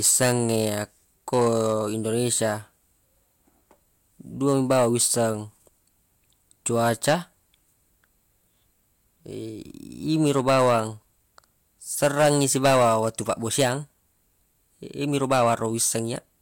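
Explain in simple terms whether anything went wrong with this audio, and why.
Something in the recording chain was fed a louder signal than it could handle, so the tops of the loudest sound waves were sliced off flat. This is hard clipping. Those flattened peaks add buzzy, crackly edges to the speech. It happens in seven bursts: 0.04–0.81, 1.33–1.75, 4.48–5.27, 6.75–7.15, 10.25–10.80, 12.03–13.73 and 15.15–15.96 seconds. The stretch from 12.03 to 13.73 seconds is both the longest and the most overloaded.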